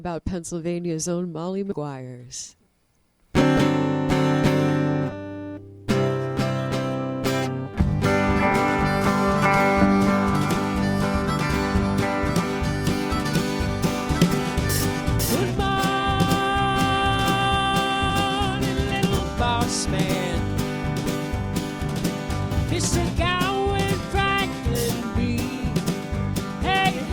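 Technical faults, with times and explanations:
1.71–1.74, 3.41, 5.11, 12.43, 18.09–18.12 and 22.51 s, compressed frames skipped: a few 20 ms frames go undecoded, so the sound jumps ahead up to a tenth of a second.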